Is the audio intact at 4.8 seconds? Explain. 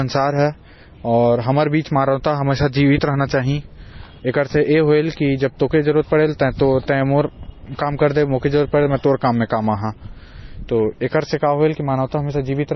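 No. At 4.8 s, as throughout, the speech carries the marks of what is likely transcoding between lossy codecs. Nothing survives above 6 kHz, and the artefacts of the different codecs sit alongside one another. That mix points to an MP3 encode at about 24 kbit/s, re-encoded to AAC-LC and then to MP3 again. A single low-bitrate encode gives one consistent artefact texture, but here each later codec has re-coded the earlier damage, so several kinds of artefact are heard together.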